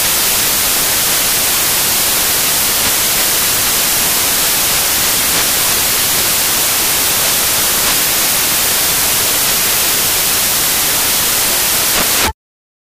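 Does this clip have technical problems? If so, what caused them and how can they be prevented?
Yes. Loud, harsh broadband noise runs through the whole clip: samples built from the wrong bytes, so the jittery low bits dominate each value. Prevent it by checking the file's declared sample format, byte order and alignment before decoding.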